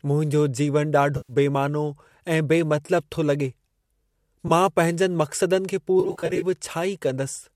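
Compressed frames of this speech recording were dropped, causing AAC frame loss with concealment: the decoder patches each gap from the last good spectrum, leaving short smeared, phasey spots at 1.17–1.33 s, 2.86–2.91 s, 4.48–4.51 s and scattered across 6.00–6.44 s, with runs of about 40 ms at most. The short frames suggest a low-delay AAC codec is likely in use.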